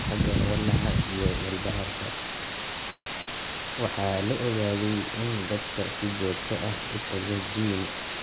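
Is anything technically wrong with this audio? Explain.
Yes. Three faults can be heard in this speech recording, which came through a G.711 mu-law call path with nothing above 4 kHz.

Low bit depth with dither runs through the whole clip. The signal is carried on only about 3 bits. Dither was added before rounding, so the rounding error turns into steady white noise instead of distortion. At this depth the hiss is roughly as loud as the speech itself. It is a constant, even hiss under everything.

A call audio freeze runs from 2.9 to 3.19 s. The audio stalls, and the last sound is stretched out as a fading buzz or hiss, then drops to silence, filling about 160 ms in all, about 80 ms of it silent. When the sound returns, it picks up where it stopped, so nothing is lost. Instead, everything after it runs about 160 ms later. This is likely packets held up in transit while the jitter buffer ran empty.

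A burst of packet loss follows, from 3.21 to 3.28 s. About 60 ms of audio never arrived in time to be played. The receiver filled the gap for about 58 ms by carrying the last sound forward and turning it down. This is heard as a short held buzz or fading hiss. The speech then resumes further on, with that stretch missing.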